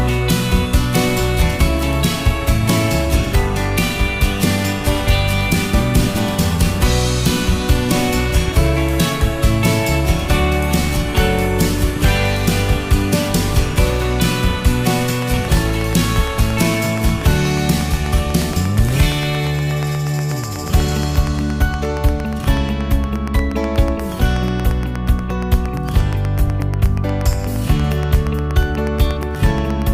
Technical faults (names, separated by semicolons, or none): train of clicks